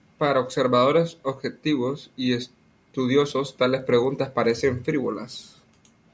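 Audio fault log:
3.75–6.14 s, resampler restarted on every block: after "observadores objetivos y estudiosos" a 20 Hz buzz rides the speech, because each 50 ms block gets resampled separately and leaves a tiny error at every edge.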